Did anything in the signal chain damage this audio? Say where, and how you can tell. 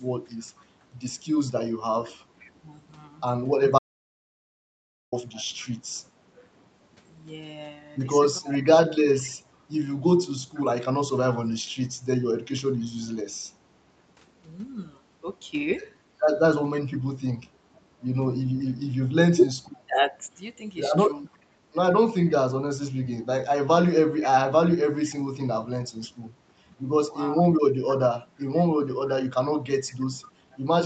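Yes. Echo leak at the call-processing stage: a faint second copy of the speech trails it by 498 ms at 0.41–5.69, 9.21–13.06, 16.74–25.1 and 29.07–30.58 s. It sits about 20–25 dB under the direct speech, likely from far-end loudspeaker pickup that the echo canceller failed to remove.

Speech suppressed in double talk, also at call processing: the speech dips briefly at 2.61–2.67 and 27.43–27.48 s, dropping roughly 10–15 dB. Across 16.83–20.31 s it ducks in pieces, totalling under half a second, by up to about 20 dB. The canceller likely attenuated the near-end talker while echo was present.

Audio dropout to silence, at the capture or driver stage: from 3.79 to 5.12 s the signal falls to silence for about 1.34 s. No room tone survives, so input was likely lost while the recorder kept writing samples. Whatever occurred in that gap is gone.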